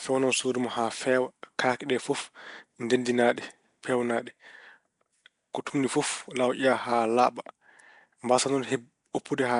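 From start to finish, the speech carries a rough, hissy halo and a smeared, underwater quality, with nothing above about 10.6 kHz. This is Nellymoser compression, likely from Flash's Nellymoser Asao coder, which fits a rate around 44 kbps. It spends a fixed two bits per sample over 256-sample blocks, so weak bands get no bits and are filled with noise. That steady noise fill, rather than the warbling, swirly artefacts of a starved MP3, is what gives it away.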